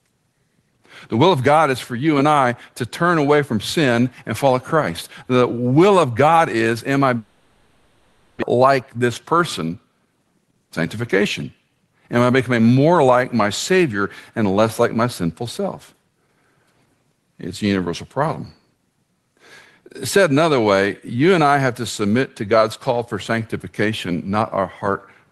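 Just after "is am I", at 7.17 s, the speech gives way to a fading, buzzy continuation of the last sound that fills the gap until 8.44 s, with no true silence. This is most likely a long network dropout. Roughly a second of audio never arrived, and the receiver concealed the hole by stretching the final sound for about 1.25 s. When speech resumes, the lost portion is simply absent, and the timing has shifted by roughly a fifth of a second.

A jitter buffer speed-up follows from 8.54 to 9.88 s at about 106 % speed, and again from 10.39 to 11.87 s at about 107 %. After the gap, delayed audio piled up in the buffer. The receiver trimmed many short pitch-period slices to drain roughly 100 ms each time, so the speech sounds slightly hurried at unchanged pitch. Throughout, the Opus call path limits the audio to about 12 kHz.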